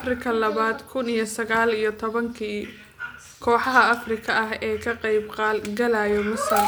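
A speech recording with nothing technically wrong with it.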